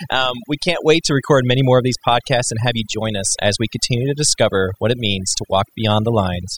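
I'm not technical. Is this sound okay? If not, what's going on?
No. Overdone noise removal runs through the whole clip. The background drops and breaks up into twinkling, warbling specks, unlike ordinary hiss.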